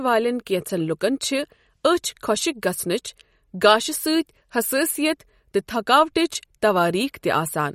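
A speech clip with plainly audible codec damage from start to finish. It sounds watery and swirly. S sounds carry metallic chirps, and attacks smear. Nothing is present above 16 kHz. The likely cause is MP3 compression at a low bitrate, which fits something near 48 kbps. Short of bits, the encoder cuts the treble at a fixed point. It also drops weak frequency lines, which flicker on and off between frames and make the swirl.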